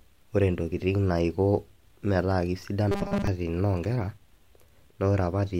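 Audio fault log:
2.91–3.27 s, robotic sound from repeated short buffers: the speech turns into a rigid metallic buzz at 200 Hz that loosely follows the words. This is likely from late-arriving audio being covered by looping a 5 ms fragment, while most of the real sound is skipped.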